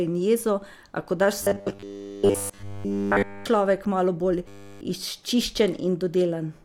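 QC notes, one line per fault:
1.43–3.46 s and 4.48–4.81 s, robotic sound from repeated short buffers: Right after "ko daš", the speech turns into a rigid metallic buzz at 100 Hz. It returns briefly after "človek malo bolj". The likely cause is that fresh audio stopped arriving in time, so the same 10 ms slice was replayed over and over. Nearly everything in these spans is repetition. The fixed loop length forces the steady pitch, while the words stay only roughly traceable.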